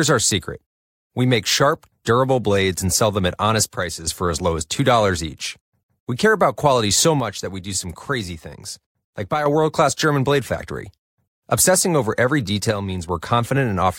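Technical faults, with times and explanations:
3.64–4.07 s, 7.20–9.46 s and 12.71–13.09 s, one channel drops out: the speech falls abruptly by about 6 dB, then snaps back to full level. The likely cause is one stereo channel going silent, halving the mono sum. It is a clean step with no fade, unlike a gain ride or compression dip.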